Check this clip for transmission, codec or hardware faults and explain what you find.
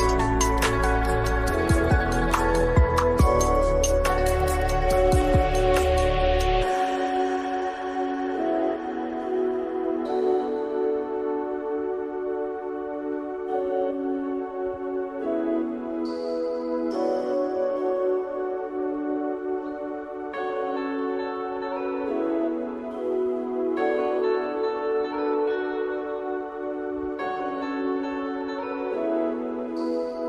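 No faults turn up anywhere in this recording. There is no moment in it that needs flagging.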